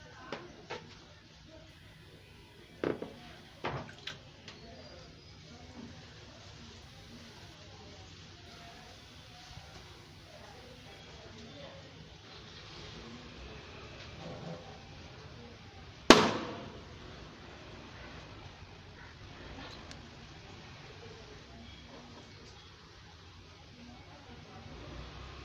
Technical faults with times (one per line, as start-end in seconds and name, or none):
0.00-12.36 computer activity noise
18.17-20.43 time-stretched section